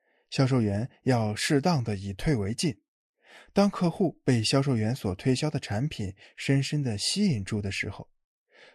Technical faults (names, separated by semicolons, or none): none